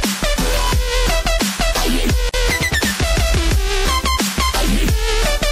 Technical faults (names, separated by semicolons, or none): MP3 compression; gap at a join of encoded pieces